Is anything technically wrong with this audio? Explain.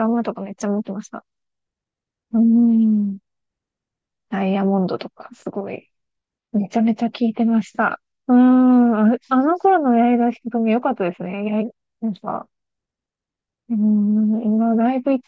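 No, nothing stood out as technically wrong when listening to this speech recording.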